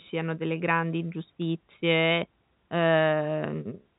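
The clip is speech carried over an ordinary telephone-band channel that cuts off around 3.8 kHz, and nothing is technically wrong with it.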